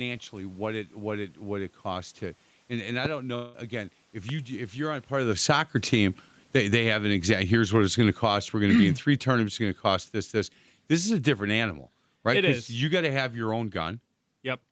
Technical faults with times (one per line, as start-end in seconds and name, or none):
3.35-3.55 long network dropout
4.29-4.32 loud pop
5.13-5.66 automatic gain falling
5.57-6.31 automatic gain rising
6.40-14.03 automatic gain falling
6.83-8.60 automatic gain rising